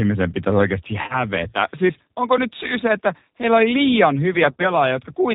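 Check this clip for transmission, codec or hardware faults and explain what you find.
Two faults are present: G.729 coding throughout the clip, and two bursts of VoIP packet loss concealed by the speech codec.

G.729 codec, entire clip. At 8 kbit/s the decoder rebuilds the speech from a vocal tract filter, a pitch predictor and a few pulses per 10 ms frame, so the codec damage is plainly audible as roughness and a synthetic edge. On a spectrogram, nothing appears above 4 kHz, leaving a hard ceiling. Harmonics look smeared and grainier than natural speech.

VoIP packet loss concealed by the speech codec, from 1.02 to 1.25 s and from 4.51 to 4.66 s. In the first burst, 70 ms of audio is missing, scattered over 80 ms, with a longest run of 50 ms. In the second burst, 40 ms is missing, scattered over 80 ms, with no run longer than 20 ms. These gaps fit lost 10 ms frames. The decoder fills each gap by repeating its last pitch and filter at falling gain, so the speech stretches into a buzzy tone or coloured noise that fades away. 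Because each frame builds on the previous one, the audio stays weak or distorted for a while after packets resume. On a spectrogram, frozen horizontal harmonic or noise bands fade across each gap. The waveform shows repetitive, shrinking cycles there.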